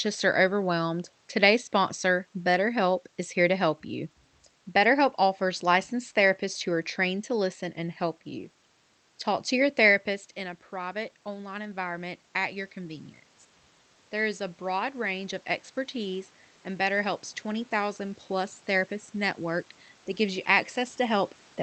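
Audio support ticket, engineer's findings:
Automatic gain rising, 10.7–13.09 s. After the talker backs off near 9.5 s (about 12 dB quieter), the AGC lifts voice and room noise together by about 4 dB, recovering only part of the loss. Repeats 14.22–20.47 s, another slow rise of about 4 dB.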